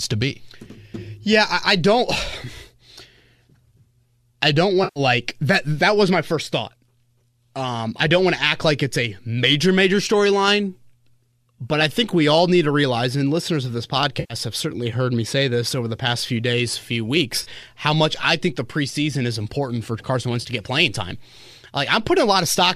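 AAC frame loss with concealment hits this speech at 4.84 to 5.00 s, 14.20 to 14.34 s, 17.43 to 17.48 s and 20.42 to 20.47 s. The decoder papers over those 120, 100 and two 30 ms gaps by re-spinning the last good spectrum, so you hear brief smeared, phasey patches.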